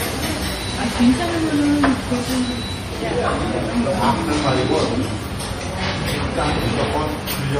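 Everyday sound with MP3 compression damage throughout: nothing above 15.3 kHz, plus a watery, swirly texture and smeared attacks, likely from a low bitrate, something like 40 kbps.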